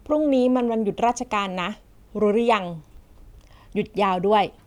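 At 1.74 s the speech jumps forward, losing roughly 15 ms of sound, and at 2.97 s a second skip loses only a few milliseconds. Both sound like a dropped buffer (overrun). The likely cause is that samples were not collected before the hardware overwrote them, so each missing piece vanished and the audio on either side was joined directly, with no gap of silence.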